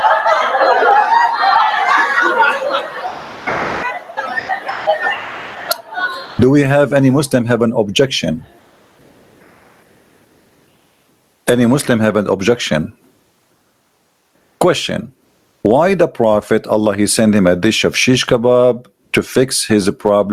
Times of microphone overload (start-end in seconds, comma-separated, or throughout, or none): none